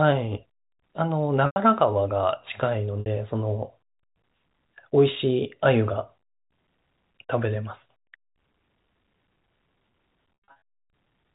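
Packet loss with pitch repetition occurs at 1.46 to 1.56 s, 3.00 to 3.06 s and 10.45 to 10.61 s. Lost audio, 100, 60 and 180 ms, is bridged by repeating the last pitch period, heard as a briefly held, buzzy tone. The third dropout is scattered, with the longest gap 80 ms, over the band-limited telephone sound.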